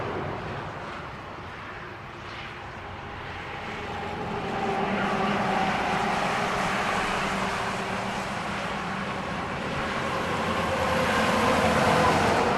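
No audible technical faults occur anywhere in the clip.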